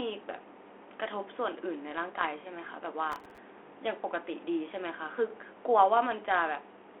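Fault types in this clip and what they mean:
Bit errors on an ADPCM link: Between 2.20 and 2.28 s you get a short cluster of pops and a rough, crunchy burst with the level jumping around. Flipped bits corrupt a few samples, but they also knock the decoder's step size and predictor off track, so each hit smears on for a few milliseconds before it recovers. The error rate sounds like a fraction of a percent, and it's riding on a narrow telephone-band link that fits 32 kbit/s G.726.
Processor overload crackle: From 3.12 to 3.38 s there's a gritty, tearing crackle laid over the speech that stops abruptly when it clears. The processor is missing its deadlines on very small buffers, well under a millisecond each, and fifteen or so misses happen across that stretch. Each miss replays a scrap of old audio with hard edges, and that stream of tiny discontinuities is what makes the tearing sound.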